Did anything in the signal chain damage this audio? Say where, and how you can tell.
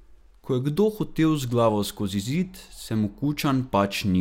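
No, nothing in the signal chain has damaged this speech recording. Across the whole clip, no stage from capture to playback leaves anything audible behind.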